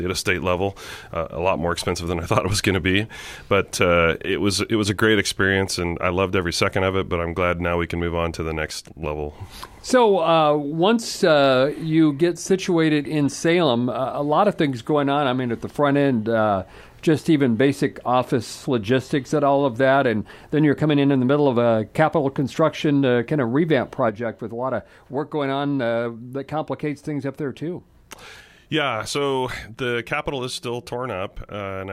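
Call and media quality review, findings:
Level drops abruptly by about 6 dB at 8.70 s for 0.32 s, recovering at 9.03 s; same sudden drop again at 24.09 s, lasting to the end. Likely one channel drops out upstream of the mono downmix, halving the shared content and removing anything carried only in the lost channel. Check stereo capture path and channel mapping.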